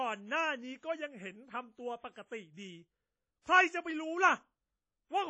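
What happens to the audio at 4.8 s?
Coarse long-block quantisation, likely from WMA compression at around 32 kbps, runs through the whole clip, so at 4.8 s the speech rings and sounds washy, with nothing above 10 kHz.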